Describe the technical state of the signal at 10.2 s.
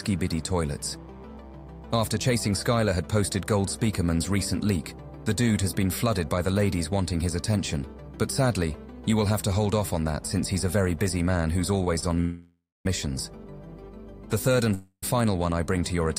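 At 10.2 s the signal is intact, with no audible fault at that point.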